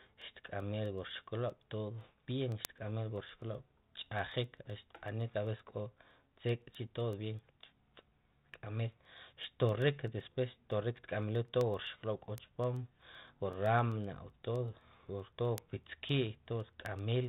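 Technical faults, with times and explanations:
0.22–17.25 s, word clock ticks: a sharp tick of uneven strength roughly every 0.15 s, around 150 in all, heard over the light 32 kbit/s G.726 telephone coding. The receiving device runs on its own clock, about 200 parts per million off the sender's, so each time the two clocks slip past each other, one sample is dropped or repeated and a click results.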